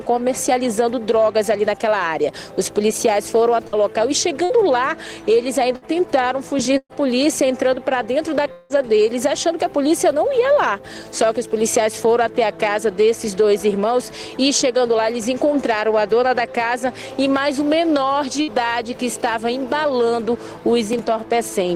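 Short stretches of the audio turn into a brief held buzz or fading hiss and then resume with a piece skipped, at 3.67, 4.44, 5.76, 6.77 and 18.42 s. This is a burst of packet loss: about 60 ms went missing each time, or about 120 ms at 6.77 s, where the concealment fades into roughly 50 ms of silence before the audio returns. At 8.52 to 8.73 s a longer stretch of about 180 ms is filled with the same kind of continued, decaying sound, with no silent gap, before the audio jumps ahead, likely a long network dropout.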